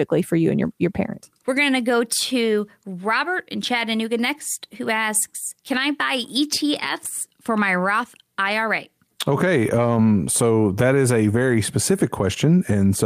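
A lost packet rebuilt from error correction occurs from 5.73 to 5.79 s. The audio never drops out. Instead, about 40 ms of speech, which fits two 20 ms packets, was played from the low-bitrate backup copy that Opus in-band forward error correction tucks into the following packet. Because that backup carries far less detail, this brief stretch sounds coarser and noisier, a short rough patch in otherwise continuous speech rather than a gap.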